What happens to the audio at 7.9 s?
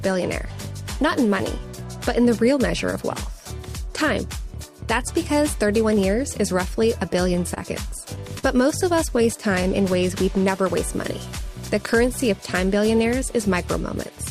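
Scattered short gaps run from 7.13 to 8.45 s: about seven brief holes, the longest around 40 ms, point to packets lost or arriving late. The receiver filled each by extending the preceding sound, leaving quick ticks, smears and small hiccups.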